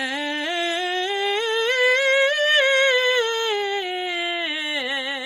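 From start to finish, the music carries a grainy, breathy edge in its upper range. Sustained tones sound rough rather than clean. The top end seems hollowed out and replaced with hiss-like filler, while content still reaches to about 20.2 kHz. The damage is heavy. This points to Bluetooth LC3 compression, likely at a low rate around 32 kbps with 10 ms frames. Short of bits, the encoder discards much of the high spectrum and substitutes noise.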